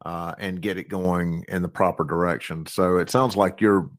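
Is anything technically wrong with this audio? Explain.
Yes, the audio has two faults. The clip is speech.

Microphone volume stepped up, at 1.05 s, between "uh and get it" and "in the proper direction": the call software judged the input too quiet and raised the device gain in a single step, so voice and background jump up together by about 7 dB.

Lost packet rebuilt from error correction, between 3.03 and 3.33 s: separate packets went missing, and the decoder filled each from the low-bitrate copy carried in the following packet, about 160 ms in all. There is no gap, but those stretches sound rougher and noisier.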